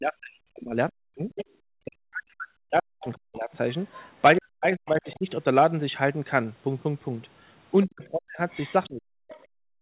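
Speech suppressed in double talk affects this speech recording from 0.0 to 3.5 s, 4.38 to 5.27 s and 7.87 s to the end: the talker dips by up to about 40 dB, losing high end or dropping out in pieces. This is likely an echo canceller that couldn't tell the talker from loudspeaker echo and turned both down. The other side's voice leaking through appears at 0.9 to 1.45 s (about 10 dB below the talker), 3.01 to 4.06 s (about 20 dB below), 4.86 to 5.15 s and 8.5 to 9.45 s (both about 25 dB below). It is likely far-end sound from the loudspeaker that the canceller left in the microphone, heard over a telephone-band call path with nothing above 4 kHz.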